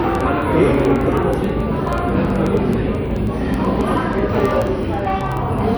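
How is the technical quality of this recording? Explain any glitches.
The recording is marred by word clock ticks that run almost the whole way through, from 0.15 s to 5.75 s. The receiving device is clearly running on its own clock rather than locking to the incoming digital link. The two clocks disagree by a few hundred parts per million, so they slip past each other about every 50 ms, and each slip drops or repeats a single sample. That produces around a hundred sharp ticks of uneven strength at a steady rate of about twenty per second. Unlike random vinyl clicks or buffer dropouts, these ticks are evenly spaced and leave no audible gaps.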